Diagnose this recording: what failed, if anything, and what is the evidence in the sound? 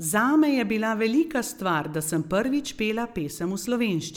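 Nothing failed in this recording, and no stage of the chain leaves an audible mark on the speech. There is no event anywhere in the sound that calls for a diagnosis.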